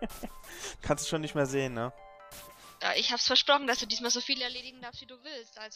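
From 4.23 to 4.60 s there's zipper noise. The level comes down by roughly 15 dB, but in bare 3 dB jumps at around fifteen a second instead of a smooth ramp. Each jump clicks, so a quick ticking zip rides on the fade.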